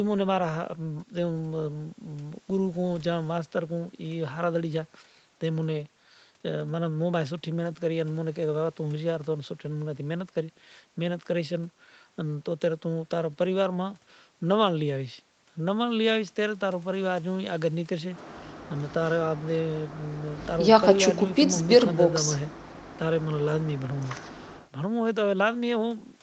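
No faults found; the speech shows the expected effects of call microphone processing and the call codec path, with content ending at about 8 kHz.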